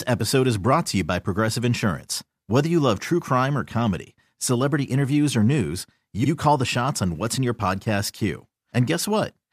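At about 6.23 s there's a quick stutter: a repeated-frames fault, where roughly 52 ms of the speech, from 6.23 to 6.28 s, plays once and then plays again straight away. That block length points to a couple of compressed frames being written or sent twice, so the decoder just ran the same slice again. The result is a short hiccup in the flow, and the clip ends up about 52 ms longer than it should be.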